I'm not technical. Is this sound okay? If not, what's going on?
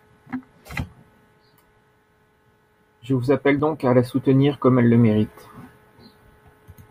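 No. At 0.76 s and again at 3.60 s, between "vous appelle" and "donc à la soutenir", the speech jumps ahead by a brief fraction of a second. This is likely a dropped buffer (overrun): no gap of silence, just a skip.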